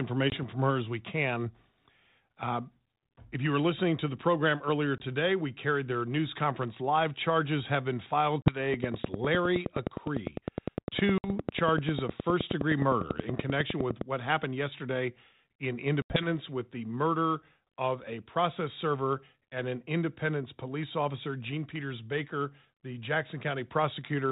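Packet loss on an ADPCM call cuts hard-edged silent gaps at 0.3 s (20 ms), 4.98 s (20 ms, between "to the program earlier" and "we carried their news"), 8.42 s (40 ms, after "have been filed"), 11.18 s (60 ms) and 16.02 s (80 ms). On the waveform each looks like a flat notch, followed by briefly distorted speech while the decoder's predictor and step size recover. From 8.74 s to 14.02 s, ending before "what happened yesterday in", a train of clicks ticks regularly at about 10 per second, around 50 in all, with peaks roughly 15 dB above the signal. These show as evenly spaced vertical lines on the spectrogram, spanning the G.726 band up to 4 kHz. They likely come from interference or a faulty connection.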